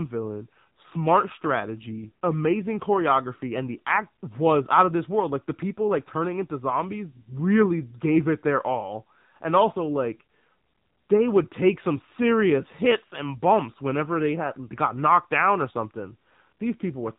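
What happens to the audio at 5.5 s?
At 5.5 s you're hearing the AMR narrowband mobile codec, which runs through the whole clip rather than hitting that one moment. Everything above about 3.8 kHz is gone, so the voice sounds boxed in and phone-like. The codec rebuilds speech from a vocal-tract model fed by a handful of pulses per frame, and at this damage level, which fits a mid-rate mode around 7.4 kbps, the voice comes out plainly buzzy and synthetic.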